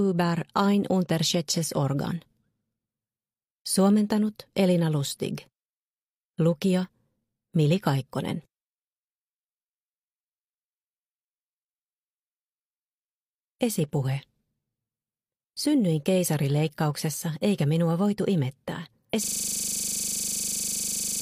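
At 19.09 to 19.14 s the sound jumps ahead with a brief blip, most likely a stream segment skipped, the player dropping a failed segment and continuing. From 19.24 s to the end, a system hang loop repeats one 40 ms piece about 49 times, a 25 Hz buzz consistent with a frozen system cycling a ring buffer.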